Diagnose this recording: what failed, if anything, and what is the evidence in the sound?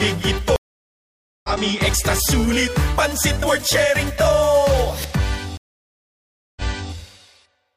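The network connection dropped twice and the player restarted its decoder mid-stream, a stream reconnect. At 0.56 s, 878 ms of silence follows, and playback resumes about a second later in the audio. At 5.57 s, 991 ms of silence ends with 372 ms of audio replayed from before the break.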